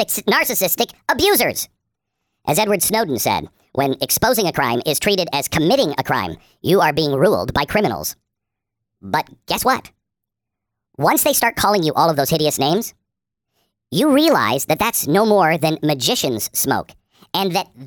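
Wrong sample rate, from start to finish: the samples are being clocked out faster than they were captured, with no rate conversion in between, so everything runs 1.5 times too fast and sits about 7 semitones higher, roughly a musical fifth. That ratio fits audio recorded at 32 kHz being played back at 48 kHz. Because speed and pitch rise together, the voice sounds squeaky, chipmunk-like and hurried, with syllables crowded closer than natural.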